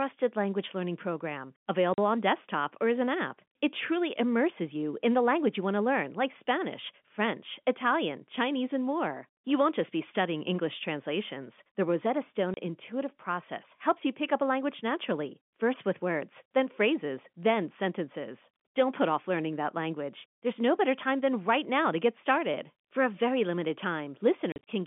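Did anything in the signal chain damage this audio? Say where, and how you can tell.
Yes, at the network stage: packet loss filled with silence. After "language learning program" a 40 ms hole opens at 1.94 s, a 30 ms gap at 12.54 s precedes "intuitive process helps you", and from 24.52 to 24.67 s about 100 ms of silence is scattered over 150 ms, the longest run 40 ms. Every hole is a multiple of 10 ms, which fits 10 ms packets dropped and replaced by zeros, leaving hard-edged holes.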